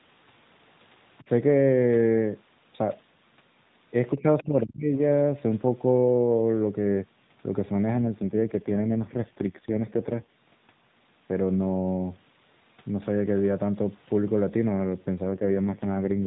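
From 4.18 to 4.25 s the speech dips by roughly 10 dB, likely speech suppressed in double talk, visible as a brief notch in the waveform envelope. At 4.37 to 4.43 s a faint second voice, about 25 dB below the talker, shows as thin spectral traces; this is likely the other side's voice leaking through past the echo canceller. From 4.43 to 5.02 s the speech is cut by as much as about 35 dB, likely the same double-talk suppression, and the waveform nearly flattens. An AMR rate drop from 12.2 to 4.75 kbps runs from 7.94 to 10.32 s and again from 15.24 to 16.26 s. Within the same narrowband limit the sound turns buzzy and synthetic, and the spectrogram's harmonics look smeared and coarser.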